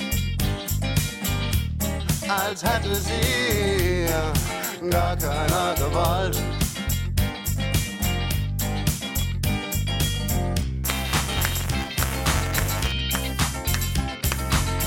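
Buffer tearing, 10.84 to 12.92 s: writer and reader cross each period, splicing in a sliver of older audio that produces a rattling 200 Hz buzz.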